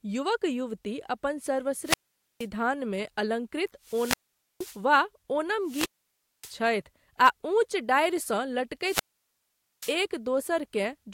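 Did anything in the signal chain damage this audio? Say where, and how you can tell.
Yes, wireless microphone squelch dropouts on the radio link at 1.82–2.48, 3.83–4.84, 5.63–6.57 and 8.81–9.98 s: the signal fades, hiss swells, and squelch mutes for about 0.47–0.83 s.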